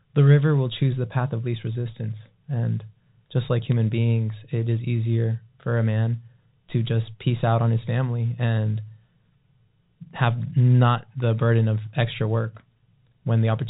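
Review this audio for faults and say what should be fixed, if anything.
Bit errors on a digital phone line at 3.72 s, between "just like" and "beings it is easier": flipped bits, roughly one in a thousand, corrupt single samples, and a hit on a high bit makes a sharp tick. This appears as a waveform spike and a thin vertical stripe on the spectrogram. Error protection on the transmission link would prevent it.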